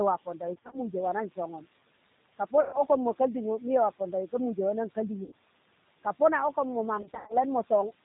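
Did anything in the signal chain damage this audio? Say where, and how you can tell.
Yes. Three stages left marks on this speech.

Call processing: noise suppressor artifacts run throughout. The suppressor cuts what it judges to be steady noise by about 18 dB, frame by frame, so the room noise falls away in the pauses and rises again under the speech. The room noise itself, about 18 dB under the speech, belongs to the recording and isn't a chain fault.

Codec: the G.729 codec at 8 kbit/s is plainly audible across the whole clip. Nothing above 4 kHz survives, so sibilants are dull. Because the codec resynthesises speech from a vocal tract filter, a pitch predictor and a handful of pulses per subframe, voiced sounds come out slightly rough and synthetic, and the suppressor's leftover noise warbles through it.

Network: VoIP packet loss concealed by the speech codec appears four times. From 0.55 to 0.79 s, 100 ms is missing in short gaps scattered over 180 ms, none longer than 30 ms. 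From 2.61 to 2.81 s, 120 ms is lost. At 5.24 to 5.35 s, right after "pondawi ka muje wannan", 80 ms is lost. From 6.97 to 7.37 s, 170 ms is missing over 320 ms, with the longest run 90 ms. In each gap the decoder repeats its last pitch and filter at falling gain, which stretches the sound into a fading smear, and the speech stays weak briefly afterward while the predictor recovers.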